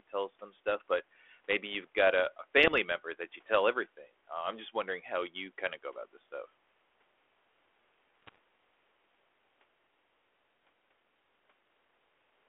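Pops and short rough bursts with brief level jumps hit at 2.67 to 2.78 s, between "you've got a a" and "member that you tell", and again, harsher, at 8.23 to 8.36 s. These are bit errors on an ADPCM link, here the 32 kbit/s G.726 telephone path: each flipped bit throws off the decoder's step size and predictor, so the disturbance rings on briefly.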